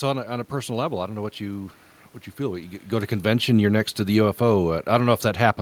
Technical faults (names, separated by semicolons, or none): automatic gain falling